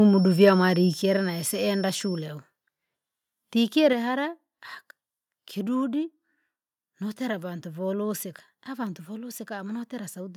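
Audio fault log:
0.43–0.50 s microphone overload: The loudest syllable peaks are flattened, giving a brief harsh crackle. The likely cause is an input volume set too high, pushing peaks about 1 dB past the converter's limit. Under one percent of samples are clipped, so it stays short.
1.02 s and 3.93 s microphone volume stepped down: Voice and background drop together in one sudden step. The drop is about 5 dB at 1.02 s and about 4 dB at 3.93 s. This is likely the call software lowering the device's input volume after judging it too loud.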